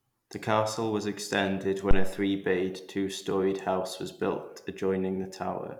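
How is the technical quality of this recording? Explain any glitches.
There's one glitch in this speech clip, a phantom power thump from 1.91 to 2.16 s, right after "castle was extended". It sounds like a low, dull knock that peaks at about -9 dBFS and dies away within about 57 ms. What happens is that phantom power is switched on or off on a live mic input, and that sudden voltage step gets through the coupling capacitors as a single deep pulse.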